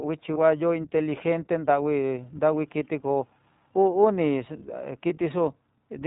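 The speech runs through the iLBC codec throughout, coded in standalone frames consistent with its 15.2 kbps, 20 ms mode. Everything above 4 kHz is cut away, and the codec damage is plainly audible: the voice sounds narrowband, slightly rough and synthetic.

Lost iLBC frames occur at 0.34 to 0.38 s and again at 5.08 to 5.11 s, each fitting a single missing 20 ms frame. The decoder fills each gap by repeating the last pitch cycle blended with noise, heard as a brief held, buzzy vowel before the voice snaps back.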